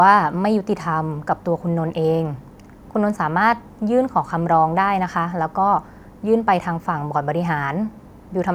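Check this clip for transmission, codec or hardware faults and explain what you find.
Nothing audible on the transmission, codec or hardware side of this speech recording; no faults found.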